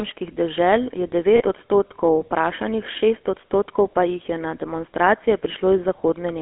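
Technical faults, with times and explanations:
Throughout, GSM full-rate codec: the speech has a buzzy, gravelly roughness and a narrow telephone band of about 300 Hz to 3.4 kHz. A coarse pulse-driven vocal-tract model at what sounds like 13 kbps keeps only a sparse excitation, so fine harmonic detail turns rough.
1.36–1.42 s, lost GSM frames: right after "dežel je" the sound briefly smears into a short metallic ring for 40 ms. The decoder filled the gap by repeating the last good frame's settings, which fits two lost 20 ms frames.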